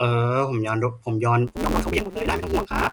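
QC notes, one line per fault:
Throughout: low-delay AAC compression, likely AAC-ELD at around 32 kbps; the low bitrate leaves speech plainly rough and grainy, with a lowered or synthetic top band.
1.47–2.92 s: block size mismatch (truncated); each block's tail is discarded, giving a 172 Hz buzz and speech running 1.88 times faster, fitting 256-sample reads.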